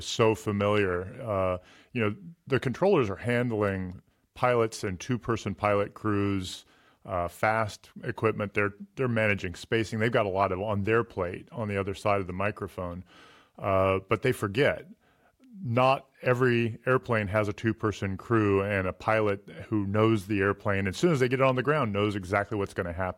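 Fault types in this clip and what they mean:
No faults detected; no dropouts, clipping, glitches or level problems found anywhere in the recording.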